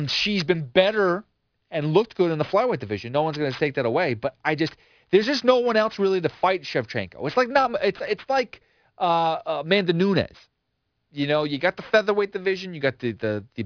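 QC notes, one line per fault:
throughout, aliasing: the speech was downsampled to a rate that fits 11 kHz without an anti-alias filter, so energy above the 5.5 kHz fold point mirrors back down as unrelated tones, roughly 20 dB below the signal, making sibilants gritty and metallic, with the spectrum running hard up to the band edge.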